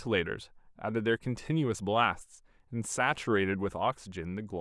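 No technical faults are audible.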